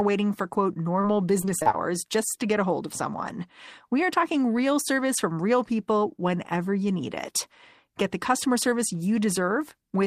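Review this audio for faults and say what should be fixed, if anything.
Short concealed packet loss occurs at 1.01 to 1.05 s. About 20 ms of the speech never reached the decoder in time, and the receiver filled the hole by extending the preceding sound before blending back into the real signal. It is heard as a single brief smear or wobble. Unlike the robotic stretch that follows, it is one isolated patch with intact speech on both sides, so nothing choppy builds up.

Repeated packet loss (robotic sound) runs from 1.41 to 1.75 s. Within that third of a second there are five separate gaps, the longest about 24 ms, totalling about 100 ms. Each one is patched by continuing the last sound, and the next gap follows soon after. About 29% of the stretch is synthesized, which gives it a choppy quality with pieces missing. Unlike a single concealed loss, it is the close succession of patches that makes the sound robotic rather than one brief smear.

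To prevent both faults, give the audio stream a more reliable network path, a larger jitter buffer, and forward error correction, so that late or lost packets can be recovered instead of concealed.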